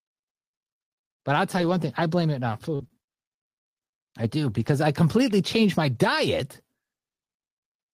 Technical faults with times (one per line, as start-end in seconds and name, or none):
1.57-1.71 lost packet rebuilt from error correction
2.75-2.91 short concealed packet loss
2.79-2.85 lost packet rebuilt from error correction
4.55-4.73 lost packet rebuilt from error correction
5.95 lost packet rebuilt from error correction